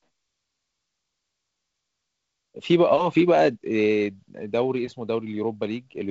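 No technical faults can be heard in this speech clip. It carries the sound of G.722 wideband telephone coding, with nothing above about 7.7 kHz and the light graininess in the lower band that fits the codec running at 48 kbit/s.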